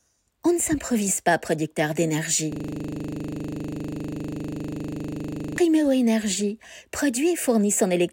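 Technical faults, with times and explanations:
2.52 to 5.58 s, system hang loop. The system froze while the sound hardware kept replaying its buffer. One 40 ms slice repeats exactly, some 76 times. At a 25 Hz loop rate this heard as a steady buzz.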